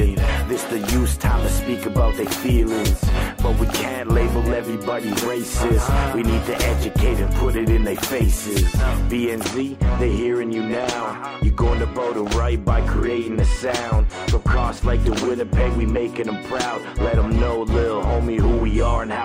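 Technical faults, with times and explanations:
9.44–19.25 s: channel delay (comb filtering). One channel trails the other by a few hundredths of a millisecond, which fits a delay of about two samples. Summing to mono cancels energy around 10 kHz, leaving a fixed notch that dulls the top end.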